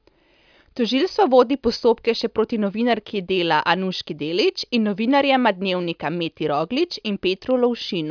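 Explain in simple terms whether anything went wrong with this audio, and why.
Nothing went wrong with this speech recording that a listener can hear. Listening closely all the way through, no moment stands out as a technical problem.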